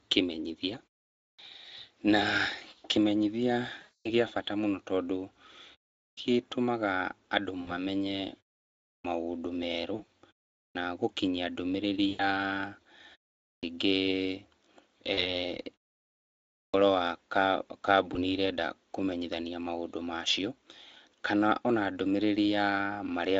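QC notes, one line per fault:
1.23 s, 6.0 s, 8.88 s, 10.58 s, 13.47 s, 16.58 s: clipped start after a pause. About 155 to 170 ms of each onset is missing because the output device wakes late after gaps of 0.3 to 0.9 s. Unlike a muted pause, the first sounds of the speech itself are lost.
3.81–4.10 s, 7.61–7.76 s, 9.95–10.02 s, 12.09–12.22 s, 15.13–15.33 s, 18.13–18.18 s: VoIP packet loss concealed by the speech codec. Between 20 and 240 ms is missing at each point, and the decoder fills it with a fading extrapolation, a buzzy tone or coloured noise, instead of silence. The weakness lingers briefly after packets resume.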